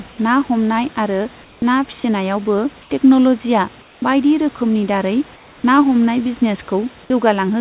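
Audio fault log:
1.44–1.62 s, 2.82–2.90 s, 3.82–4.02 s and 5.36–5.64 s: comfort noise in place of the background. The sender likely stopped transmitting during these pauses, and the receiver filled them with synthetic noise. For 80 to 280 ms, the real room background gives way to a flat, featureless hiss about 2 to 5 dB quieter. The second gap falls just before "टेकन'लजिया बायदि रोकोमनि दारै", and the fourth falls just after it. The call path is band-limited, with nothing above 4 kHz.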